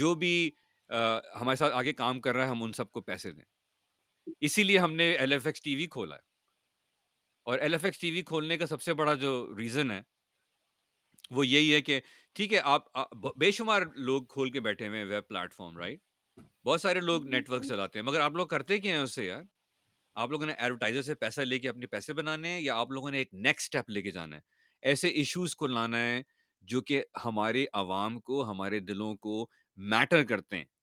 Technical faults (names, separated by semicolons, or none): none